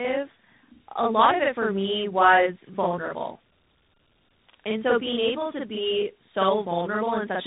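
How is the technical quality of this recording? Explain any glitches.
Technical quality is poor throughout, with two faults present from start to finish.

Channel delay (doubling) runs the whole clip: one channel trails the other by about 46 ms, consistent with a 2048-sample buffer, and the mono sum yields an equal-level slap echo. On the waveform, every onset appears twice; the spectrogram shows fine comb-filter ripple.

Tandem speech coding also lasts throughout. The speech crossed AMR-NB, G.711 A-law and CVSD, so it was decoded and re-encoded at each link, with two speech coders compounding damage. It sounds rough, muffled and warbly, and the spectrogram shows nothing above 3.8 kHz.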